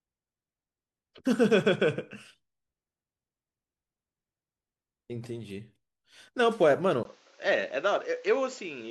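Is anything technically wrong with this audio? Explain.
Yes. At 7.03 s the recording drops out for about 20 ms, and from there to the end the speech loses everything above 7.6 kHz, so it goes duller and a bit boxy, with a new noise floor sitting well below the voice. The level stays about the same. That pattern points to an input switched to a poorer device, likely a different mic or a headset's call profile, whose narrower band and own hiss replace the original path.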